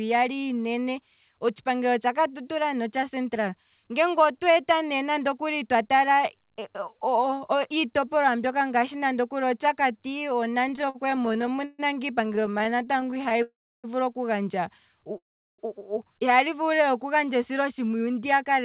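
Between 10.66 and 11.81 s the audio falls into repeated stalls, a stutter: packets arrive late, the buffer keeps running dry, and the receiver stretches the last sound to fill each hole, the longest about 140 ms. Roughly a third of that stretch is filler. It stutters again, in shorter hitches up to 20 ms, from 12.25 to 13.40 s.

Right after that, from 13.42 to 13.86 s, there's a call audio freeze. The sound hangs for about 0.41 s, mostly dead silence, then picks up where it left off, with nothing lost. The likely cause is packets held up in transit. A second freeze, 15.18 to 15.60 s, is nearly all silence.

From 18.00 to 18.62 s a jitter buffer speed-up trims small slices, roughly 70 ms in all. The audio runs about 9% fast at unchanged pitch and sounds hurried. Throughout, the narrowband call path leaves nothing above 4 kHz.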